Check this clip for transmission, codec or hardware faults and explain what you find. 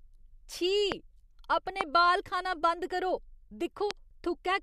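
Three loud pops sit on top of the speech, at 0.92 to 0.94 s, 1.81 to 1.83 s and 3.91 to 3.93 s. Each is most likely a brief electrical pulse, from a connector, a switch, static discharge or a driver glitch, added to the signal and then shaped by the circuitry that follows. The result is a sharp single pop lasting about 20 ms, peaking roughly 20 dB above the speech at the first and third points and somewhat less at the second, while the speech carries on underneath.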